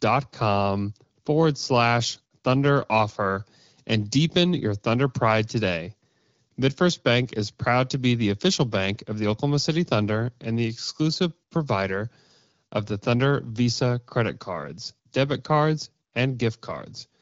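Nothing goes wrong anywhere in this recording, which comes through as speech over the AMR wideband (HD Voice) codec at 12.65 kbit/s, carrying just the light coding character you'd expect at that rate.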